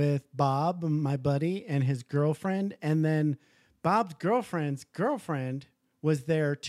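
No technical faults can be heard anywhere in the speech; the signal stays steady and continuous throughout.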